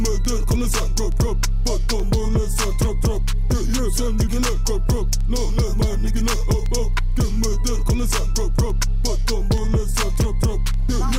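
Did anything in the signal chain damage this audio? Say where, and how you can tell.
Yes: word clock ticks on an unlocked digital link, about every 0.3 s from 0.25 to 11.03 s. These are single-sample slips, evenly spaced unlike random clicks.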